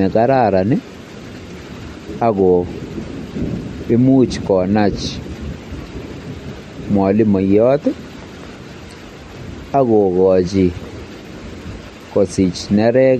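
Speech with plainly audible MP3 compression damage throughout, likely from a low-bitrate encode around 48 kbps: nothing above 13.1 kHz, plus watery, swirling artefacts on sibilants, unlike a clean low-pass filter.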